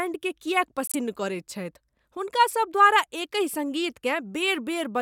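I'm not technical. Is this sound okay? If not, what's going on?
No, there's one problem. Right near the start, from about 0.87 to 0.95 seconds, the speech drops out into silence for roughly 80 milliseconds. This is a corrupt frame muted fault. The audio is stored in small compressed chunks, and a few of them got damaged, so the player couldn't decode them and played silence instead. The gap starts with a sudden cut, and its length suggests about four chunks were lost. The timing afterwards stays in step.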